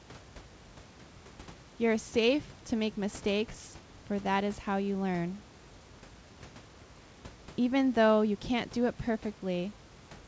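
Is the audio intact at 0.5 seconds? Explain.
No. From 0.11 s to the end there's a soft, fast rattle of clock slip clicks, ticking roughly every 20 ms. The likely cause is two unsynced clocks drifting about 1000 ppm apart, dropping or repeating one sample each time the gap reaches a whole sample.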